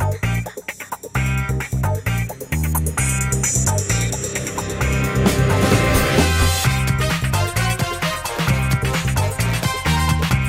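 Nothing in this audio stands out as a technical fault, so there's no problem to point to anywhere along the way.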